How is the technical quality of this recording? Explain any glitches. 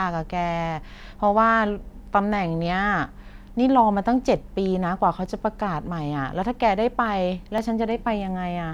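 Two brief glitches interrupt the speech, at 5.26 s and 7.58 s. At each, the audio jumps forward with no gap, skipping roughly 10 ms and then about 5 ms. The likely cause is a dropped buffer (overrun): samples were overwritten before being read, and the surviving audio on either side was spliced together.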